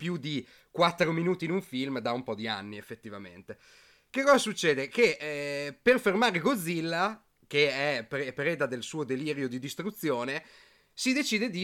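Listening closely to this speech recording, nothing stood out as a technical problem.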